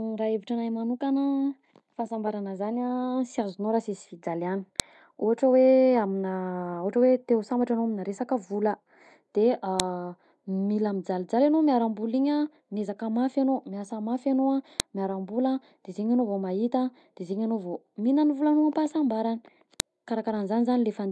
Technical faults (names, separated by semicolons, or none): file header played as audio